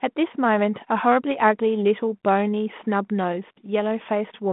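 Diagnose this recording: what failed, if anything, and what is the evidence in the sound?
Nothing has failed: the speech comes through a G.726 ADPCM path at 32 kbit/s, with the line band running from 150 Hz to 3.5 kHz, nothing present above 3.8 kHz, and only the light coding hiss that this rate leaves riding on the signal.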